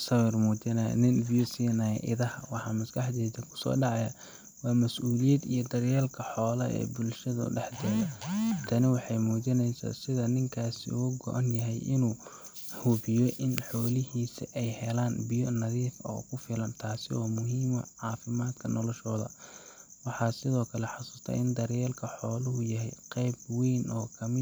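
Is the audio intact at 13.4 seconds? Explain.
Yes, at 13.4 s the audio is intact, with the speech running cleanly through that moment and no dropout, click, distortion or other fault to be heard there.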